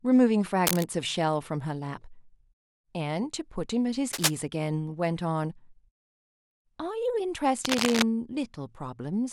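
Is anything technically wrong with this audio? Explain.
Yes. Cable scratch noise appears three times in this speech clip: 0.67 to 0.84 s, 4.13 to 4.35 s, and 7.65 to 8.03 s. Each burst is a dense, irregular crackle and rustle riding on the speech at roughly the same loudness, lasting about 0.2 to 0.4 s. The likely cause is a worn cable, connector or control being moved, so its contact resistance jumps around rapidly and injects scratchy noise into the signal.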